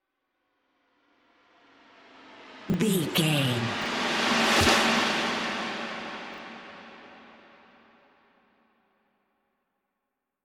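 A 20 ms chunk of audio was delivered one slot late three times, at 2.70 to 2.74 s, 3.82 to 3.86 s and 6.34 to 6.38 s, so each swaps places with its neighbour. These chunks out of order cause brief jumbled stutters.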